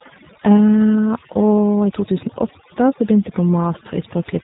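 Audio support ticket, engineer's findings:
Overdone noise removal, throughout. Background drops and breaks up into twinkling specks. Suppressor set too strong, cutting bands near its noise estimate, quiet speech detail included.

G.729 codec artefacts, throughout. Plainly rough, synthetic speech; nothing above 3.8 kHz. Consistent with an 8 kbit/s G.729A VoIP path rebuilding speech from filter, pitch predictor and sparse pulses.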